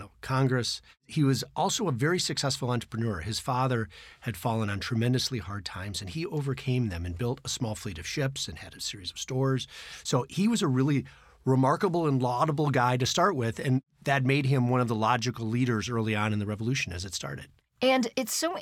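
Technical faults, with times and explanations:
Listening closely to the speech turned up nothing technical that stood out at any point.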